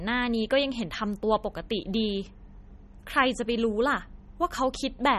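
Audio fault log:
Throughout: MP3 compression. The speech has a plainly audible watery, swirling texture, with metallic chirps on s sounds and nothing above 13.1 kHz. This is likely an MP3 encoder short of bits, which fits a 32 kbps bitrate, cutting the treble and toggling weak frequency lines between frames.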